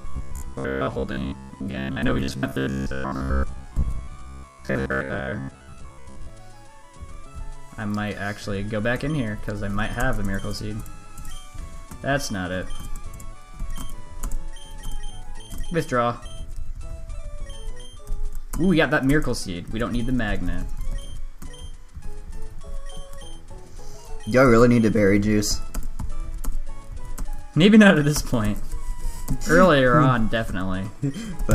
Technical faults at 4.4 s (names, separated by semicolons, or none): robotic sound from repeated short buffers